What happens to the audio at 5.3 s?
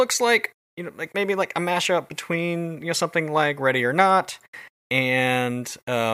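Nothing goes wrong at 5.3 s; the speech carries on intact through that moment with no dropout, click or distortion.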